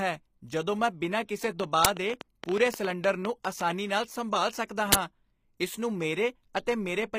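Throughout the clip the treble has a synthetic, gritty quality, and s sounds come out metallic or lispy; this is plainly audible and is likely HE-AAC compression, which fits a low rate near 24 kbps. The codec keeps only the lower spectrum and rebuilds the top by copying bands upward, so harmonics above the crossover do not line up.

From 1.44 to 3.62 s a train of clicks ticks over the speech and the pauses, about nine per second at uneven spacing, roughly twenty in all, peaking about 15 dB above the signal. The clicks share one shape, consistent with interference or a faulty connection or supply.

Within that stretch, at 1.85 s, an uninitialised buffer produces a short crack lasting 5.8 ms, which fits a 256-sample block played before audio was written to it, so leftover memory came out as samples. The same fault returns from 4.92 to 4.95 s as a 23 ms burst of digital noise, consistent with a 1024-sample block.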